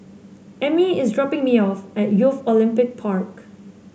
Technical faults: none

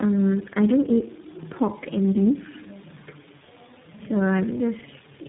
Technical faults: tandem speech coding

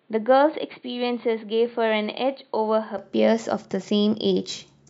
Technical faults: input switched to a poorer device

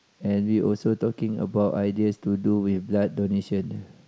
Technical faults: none

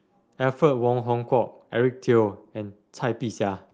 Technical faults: none

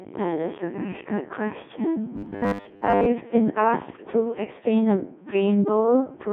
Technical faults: Codec 2 vocoder; robotic sound from repeated short buffers

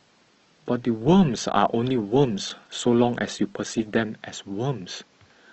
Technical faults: adaptive stream starting at a low bitrate

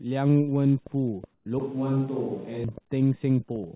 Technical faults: train of clicks; comfort noise in place of the background; switch to a distant microphone

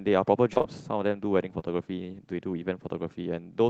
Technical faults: short concealed packet loss

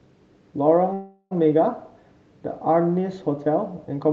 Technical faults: call audio freeze

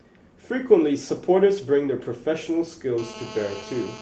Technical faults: lost packet rebuilt from error correction; GSM phone buzz

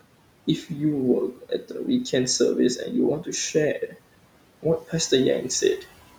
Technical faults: noise suppressor artifacts; speech cut by the noise suppressor

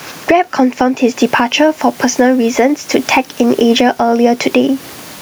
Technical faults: gain pumping

